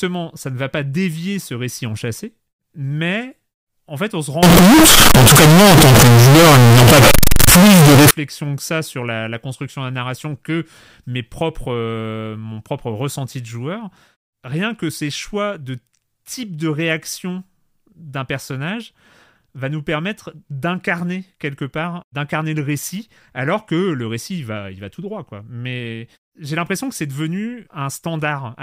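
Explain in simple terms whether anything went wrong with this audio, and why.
Float read as integer, from 4.43 to 8.11 s: the speech abruptly becomes a very loud, harsh buzz, and the background noise turns as loud as the talking, though the rise and fall of pitch can still be followed. The likely cause is audio stored as 32-bit floating-point numbers but read back as 32-bit whole numbers. Each sample's sign and exponent then set its level, flattening the wave into a near-square shape at an almost fixed, high level.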